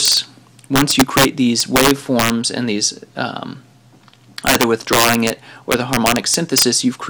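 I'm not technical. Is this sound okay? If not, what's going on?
No. Harsh, violent cracks burst through the loud moments at 0.06 to 0.17, 0.76 to 1.25, 1.60 to 2.30, 4.47 to 5.30 (the worst) and 5.72 to 6.62 seconds. This is integer overflow: the loudest peaks went past the biggest number the audio could store and flipped to the opposite extreme instead of being held at the limit.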